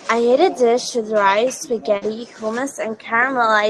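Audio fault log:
1.97–2.03 s, short concealed packet loss: a brief smear in the speech as about 40 ms never arrived and the receiver extended the preceding sound before blending back.
2.01–2.03 s, lost packet rebuilt from error correction: a rougher, noisier 20 ms stretch, played from a low-bitrate copy of one lost packet carried in the following packet.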